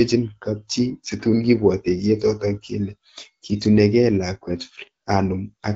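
No faults heard; the speech comes through the AMR wideband (HD Voice) codec at 12.65 kbit/s, with only the light coding texture expected at that rate.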